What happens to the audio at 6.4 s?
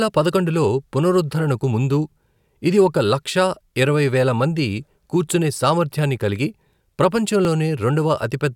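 Nothing goes wrong at 6.4 s; the speech carries on intact through that moment with no dropout, click or distortion.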